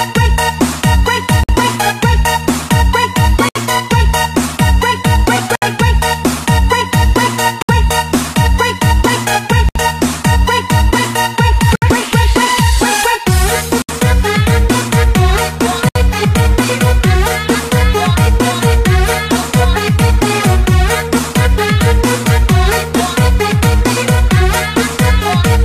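Starting at 1.44 s and then at 3.49, 5.55, 7.62, 9.69, 11.75, 13.82 and 15.89 s, the sound drops out briefly: 53 ms the first time, 67 ms after that, and then it resumes right where it stopped. That's a gap at a join of encoded pieces. The audio was encoded in roughly 2-second chunks and stitched together without trimming the encoder's leading delay and final-frame padding, so each seam leaves a short silence with smeared edges.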